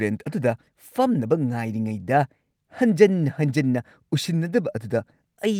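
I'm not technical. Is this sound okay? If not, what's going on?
Yes, no technical faults are audible anywhere in this speech recording.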